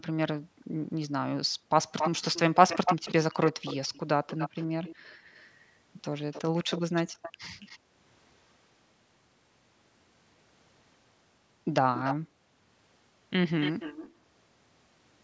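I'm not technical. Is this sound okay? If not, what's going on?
No, it has two problems. First, background gated by the echo canceller: the room sound briefly drops out at 0.41–1.69, 4.97–5.22, 7.79–8.13 and 12.16–12.72 s, when the call's echo canceller clamps the microphone. Second, an echo leak: a quieter copy of the speech trails 277 ms behind at 1.98–7.79, 11.94–12.16 and 13.6–14.12 s, likely because a loudspeaker's sound slipped past the canceller.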